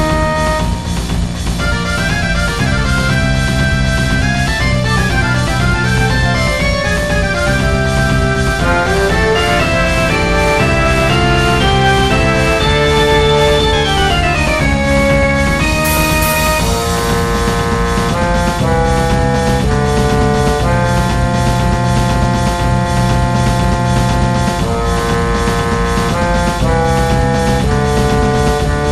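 Hard clipping runs from the start. The signal is overdriven by about 8 dB, so a few percent of peaks are cut flat, giving harsh crackle. Throughout, the sound is dull and gurgling, with granular distortion. This is likely MP2 compression, starving upper bands of bits, which fits a low bitrate near 80 kbps.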